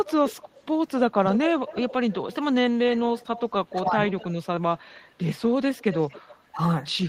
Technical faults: echo leak

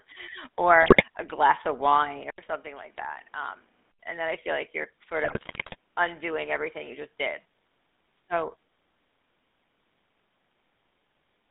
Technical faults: GSM full-rate codec; GSM bit errors; input switched to a poorer device

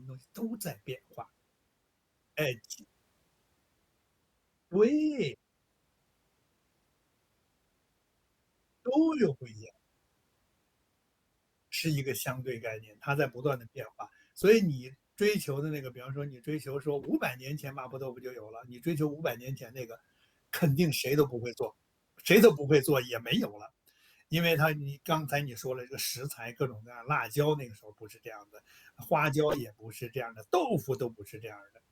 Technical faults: corrupt frame decoded

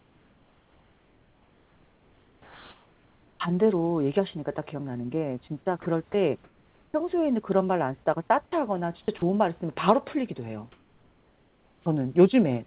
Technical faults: comfort noise in place of the background; sound dropped by the voice detector; sound chopped by the voice detector; onset clipped by the voice detector

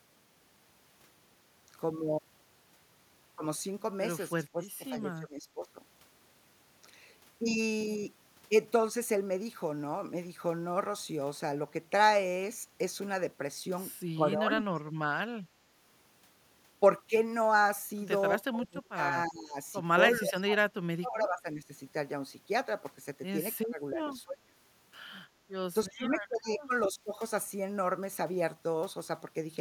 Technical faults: speech suppressed in double talk; background gated by the echo canceller

